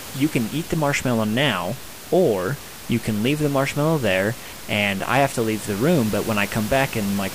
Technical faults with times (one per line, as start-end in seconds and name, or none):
none